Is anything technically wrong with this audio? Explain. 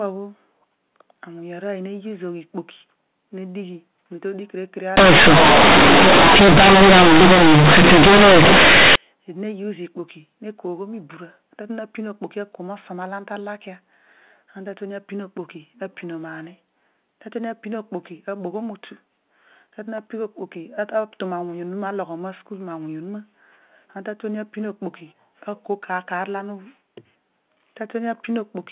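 Yes. From 4.97 s to 8.96 s, companded audio is read as linear. The stream is G.711 A-law at 8 kHz, but for these four seconds its bytes are played as plain 8-bit samples with no expansion. The logarithmic codes are taken at face value. Every sign change then throws the output across about half its range. Quiet parts come out as loud as loud ones, and the waveform is badly bent. You hear a harsh, very loud buzz, with heavy noise filling the pauses.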